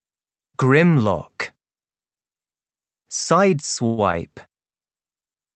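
Audio arrives over a call path that sounds band-limited to about 8 kHz. At 3.86 s a call audio freeze sets in, lasting until 4.00 s. The last sound stretches into a fading buzz or hiss, then resumes where it stopped, roughly a tenth of a second late. Delayed packets likely drained the jitter buffer.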